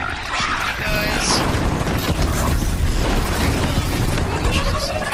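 A call bitrate drop starts at 3.69 s and lasts to the end of the clip. The encoder was forced to spend far fewer bits, which fits a fall from about 48 kbps to 15 kbps, so the sound turns coarse and rough for the final stretch.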